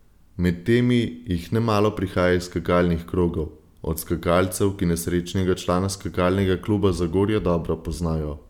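At 3.22 s, just after "nemalo prihaja iz skakalnih", a DC step occurs. The waveform's zero line suddenly shifts by about -32 dBFS. This is heard as a brief low thump. The offset then drains away through a 20 Hz high-pass. The speech carries on unchanged.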